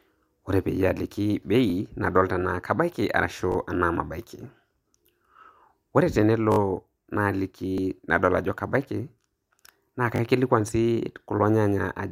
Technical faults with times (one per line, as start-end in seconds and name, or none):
1.70-1.72 repeated buffer
3.52-3.56 repeated buffer
6.52-6.58 repeated buffer
7.78 repeated buffer
10.16-10.20 repeated buffer